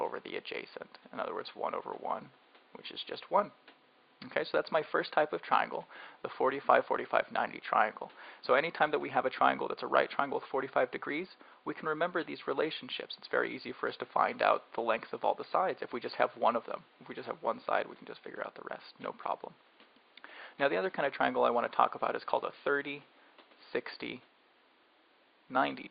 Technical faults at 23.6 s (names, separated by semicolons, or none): none